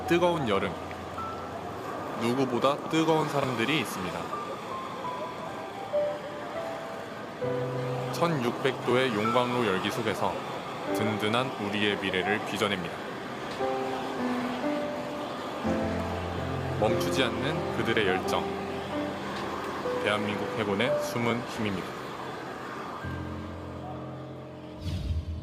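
No technical faults are audible anywhere in this audio.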